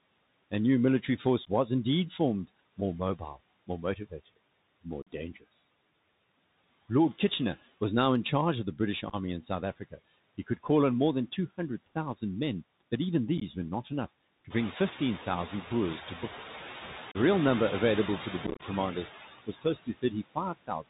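Speech recorded through a Bluetooth headset carries four kinds of fault. The Bluetooth CVSD headset codec is audible throughout. Nothing is left above 4 kHz, s sounds come out scratchy, loud bright sounds distort, and a granular hiss sits under the voice. That hiss and scratchiness are what separate it from an ordinary narrowband phone channel, which is band-limited but clean, and they fit a one-bit, 64 kHz adaptive step stream. Noise suppressor artifacts are also present for the whole clip. The background is pulled down by about 19 dB between phrases and swells back up under the voice. That pumping tracks the speech frame by frame, unlike a steady noise floor. The room noise itself climbs by about 12 dB near 14.5 s, staying about 11 dB below the speech, which makes this gating easier to hear. Unconcealed Bluetooth headset packet loss leaves abrupt holes with nothing filled in, and the voice resumes briefly quieter. 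The holes fall at 1.45 s, between "new military force" and "was indeed formed more", at 5.02 to 5.07 s, and at 17.12 to 17.17 s. Rougher scattered dropouts occur at 9.09 to 9.16 s and at 13.38 to 13.43 s between "men but even" and "were not enough". The worst is a crackly run of about 0.1 s lost across 18.47 to 18.63 s after "to the". The hard edges and silence distinguish these from suppressor dips. Speech cut by the noise suppressor makes sounds swallowed rather than chopped. This happens at 3.67 to 4.27 s (down about 13 dB), at 19.47 to 20.38 s (about 20 dB), and from 20.57 s to the end (about 16 dB). Here the voice fades smoothly along with the background instead of dropping out sharply.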